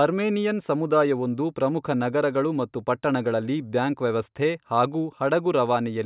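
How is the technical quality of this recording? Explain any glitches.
The recording's signal holds together without any audible technical glitches.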